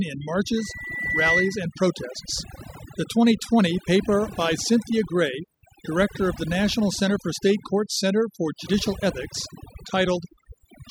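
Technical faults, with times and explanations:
Throughout: overdone noise removal. A noise reduction stage set far too aggressively treats any frequency band sitting near its noise estimate as noise and drives it down or out entirely. The softer components of the speech fall below that threshold and are stripped along with the noise. What remains is a background that drops and breaks up, speckled with twinkling, chirpy fragments.
0.57 to 1.63 s: loudspeaker feedback squeal. The microphone is picking up the loudspeaker it drives, and around 2 kHz the round-trip gain climbs above unity, so that one frequency reinforces itself on every pass. The tone swells over roughly the first 0.7 s into a piercing squeal that ends up somewhat louder than the speech itself, then stops at 1.63 s, consistent with the loop being broken or the gain pulled back.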